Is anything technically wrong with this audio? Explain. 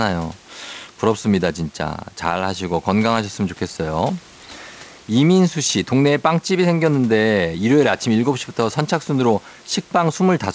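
No, nothing here is technically wrong.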